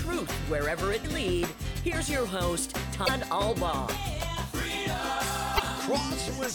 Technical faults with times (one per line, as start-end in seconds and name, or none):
1.01-1.05 damaged data in a compressed stream
3.05-3.09 damaged data in a compressed stream
5.55-5.60 damaged data in a compressed stream